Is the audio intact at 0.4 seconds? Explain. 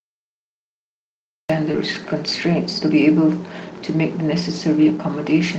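No. At 0.4 s the clip is in a cut-off start: digital silence from 0.0 to 1.50 s, then speech begins mid-sound because capture started late. Unlike a dropout, the sound never existed before the cut; unlike a fade-in, there is no gradual attack.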